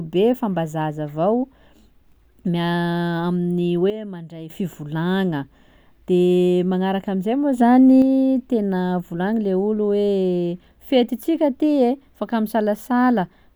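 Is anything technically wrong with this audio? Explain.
Yes. Sudden gain jumps occur from 3.9 to 4.5 s, dropping the speech by about 12 dB, and from 7.58 to 8.02 s, raising it by about 5 dB just before "tena volagny le". Speech and background noise step together, likely from gain applied instantly without a ramp.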